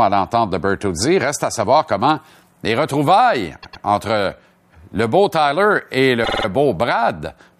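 At 3.62 s the speech stutters: a 104.5 ms slice plays twice more, running to 3.83 s. At 6.23 s a shorter 52.2 ms slice repeats four extra times, a quicker stammer lasting until 6.45 s. These are repeated frames: a block of compressed frames was duplicated before decoding, so the same fraction of a second plays again verbatim, each time adding 209 ms to the running length.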